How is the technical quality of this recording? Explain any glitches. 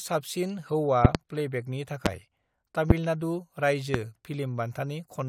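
The recording is marred by five loud pops in the speech. A voltage spike, likely from a plug, switch, static or driver glitch, enters the signal chain, and the following circuitry shapes it into a brief pulse. This gives sharp pops at 1.05 to 1.18 s (a close pair), 2.06 to 2.09 s, 2.90 to 2.93 s and 3.94 to 3.97 s. They sit about 25 dB above the speech (about 20 dB for the last), and the speech continues underneath.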